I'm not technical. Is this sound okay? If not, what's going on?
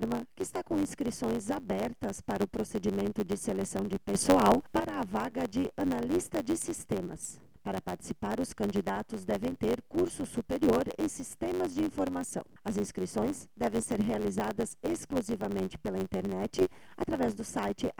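No, not quite. There's a steady low buzz all the way through, and everything runs about 7% fast while keeping its normal pitch. That's a block size mismatch (truncated): one stage hands over chunks that fits 512 samples each, the next reads less, and the leftover tail is dropped about 92 times a second. Then there are two sudden gain jumps, from 4.14 to 4.8 s and from 16.61 to 17.06 s, where the sound and its background hiss both get noticeably louder all at once, likely from a volume setting switched without a fade.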